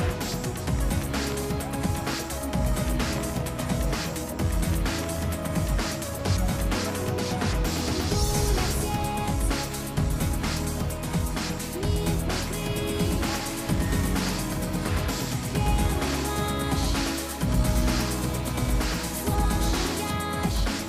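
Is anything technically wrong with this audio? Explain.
Yes. From 12.76 s to 20.10 s there is a doubled audio track. A second full-band copy of the sound runs roughly 100 ms behind the original, about 5 dB quieter. This is likely caused by the signal being captured twice, once through a slower path. The copy carries no decay or room colour. It sounds like a flat, hard slapback echo on every sound. It starts and stops abruptly at those two points.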